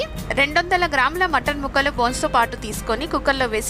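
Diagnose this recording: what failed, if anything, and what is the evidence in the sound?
Nothing stood out on listening; no stage of the chain gives itself away in the sound.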